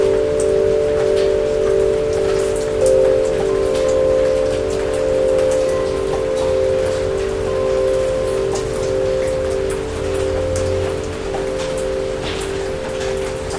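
No audible technical faults are present anywhere in the recording.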